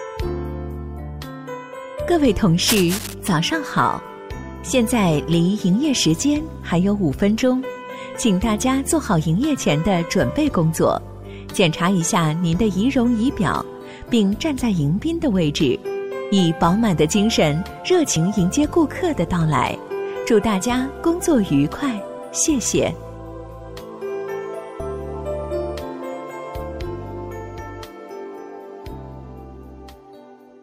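From 2.62 to 3.14 s, a dense, uneven scratching rustle sits over the sound at about 5 dB below it: cable scratch noise, likely from a worn cable or connector being moved. Unlike steady hiss or a single click, its bursts are irregular and grainy.

At 18.16 s and again at 24.79 s, the audio jumps forward by roughly 50 ms, which fits about two compressed frames of 26.1 ms being skipped.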